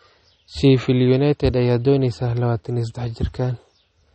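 From start to finish the speech has a dull, watery swirl, with nothing above 8.4 kHz. That points to MP3 compression, likely at a low bitrate around 32 kbps, where the encoder chops the treble and lets weak frequency detail flicker between frames.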